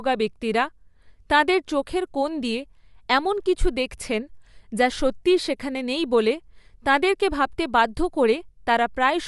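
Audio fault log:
Throughout, Bluetooth LC3 compression: the speech has a plainly audible grainy, breathy edge, likely from a transform codec filling sparse upper bands with noise, which fits 10 ms frames at 48 kbps. A spectrogram shows a hard ceiling at 11.6 kHz and blocky, noise-filled upper bands.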